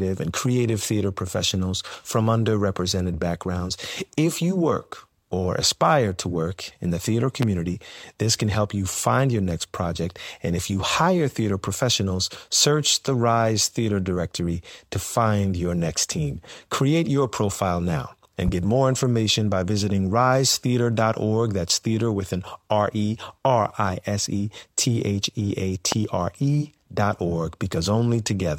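Loud pops at 7.42–7.45, 18.48–18.51 and 25.92–25.95 s, likely voltage pulses, jump about 15, 10 and 20 dB above the speech, each a single narrow waveform spike and vertical full-band spectrogram line.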